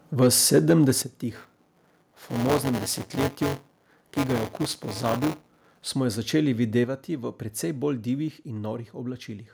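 Microphone overload at 0.22 to 0.27 s and again at 0.54 to 0.9 s gives the loudest speech peaks a harsh, crackling edge. The likely cause is input gain set about 3 dB too high, so a small share of samples hit the converter's ceiling and their tops are sliced flat.

Microphone volume stepped down at 1.02 s drops the voice and background together by about 8 dB in one abrupt step, likely the call software reacting to those distorted peaks by cutting the device's input level.

Buffer tearing runs from 1.34 to 5.88 s, starting just before "smo jo", as a robotic buzz at 188 Hz riding on the speech. The writer and reader of the audio ring buffer have drifted so they cross inside each period, which fits a 256-sample buffer. Roughly 15% of each period replays audio about 15 ms old, with a hard splice at both edges.

A second microphone volume stepped down at 6.84 s lowers the whole signal by about 5 dB at once, likely another automatic cut to the input gain.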